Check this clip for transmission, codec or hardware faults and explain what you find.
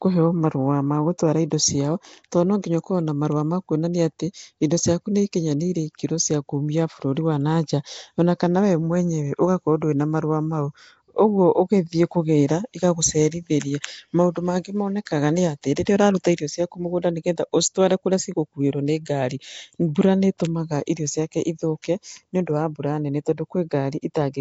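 Two faults are audible: codec damage throughout and three brief pre-echoes.

Nellymoser compression runs through the whole speech recording. The likely cause is the Nellymoser Asao codec used by Flash. It gives each block of samples a fixed, small bit budget. Weak bands get nothing and are refilled with noise. The sound points to a low rate, around 32 kbps. Nothing is heard above 7.7 kHz. The speech has a rough, hissy halo and a smeared, underwater character.

Pre-echo occurs at 15.85 s, just after "mangĩ monekaga nĩ atĩ", again at 16.24 s, and at 16.37 s, just before "ciaku mũgũnda nĩ getha". Each time, a sharp attack lands late in a coding block. The codec spreads that block's quantisation noise evenly, so hiss meant for the loud part fills the quiet gap before it. The smear lasts 16, 11 and 17 ms. Each onset is preceded by a short hiss and sounds softened.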